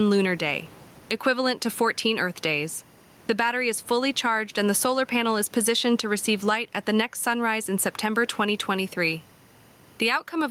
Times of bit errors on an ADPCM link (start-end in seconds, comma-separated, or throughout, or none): none